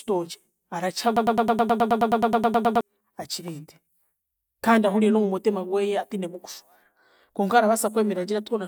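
At 1.17 s the speech hits a broken-record loop: a chunk of about 106 ms repeats back to back, 15 times, until 2.81 s, with a stuttering repetition. Most likely the player or stream stalled and kept resending its last fragment, so whatever belonged there is gone.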